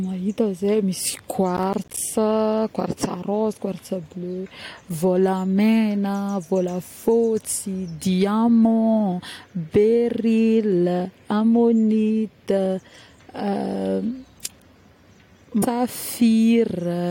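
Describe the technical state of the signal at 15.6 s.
At 15.62 s the speech jumps abruptly forward with a small blip, most likely a stream segment skipped: one chunk failed to load and playback carried on from the next.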